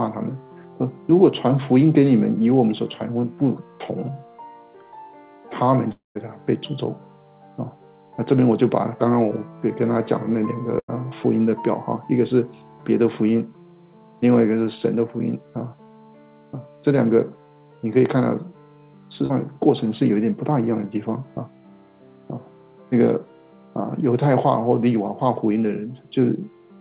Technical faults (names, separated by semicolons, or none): long network dropout; burst of packet loss; short concealed packet loss